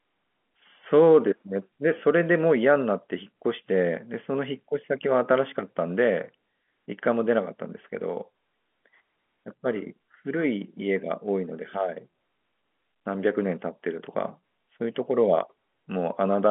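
Nothing here stands out as a fault; the speech simply sits in the narrow telephone band of G.711 A-law coding, with nothing much above about 3.8 kHz and only a faint trace of the format's own grain riding under it.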